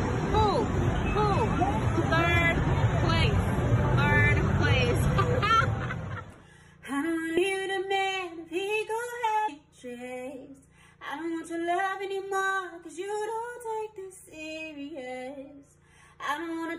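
Three brief glitches break the audio at 3.23, 7.36 and 9.48 s, each lasting under 20 ms. They are damaged data in a compressed stream: corrupted bytes make the decoder misread those frames and lose sync until it finds the next valid frame header.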